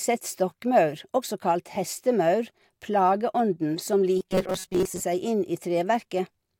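From 4.19 to 5.01 s the speech goes robotic, the classic robotic sound from repeated short buffers. The voice collapses into a stiff, metallic buzz pinned at 188 Hz that still loosely tracks the words. That pitch corresponds to a tiny chunk of roughly 5.3 ms being replayed over and over. About half the audio in that stretch seems to be repeats rather than fresh material. The likely cause is fresh audio arriving too slowly, so the playback side kept looping its last scrap while the real audio was skipped.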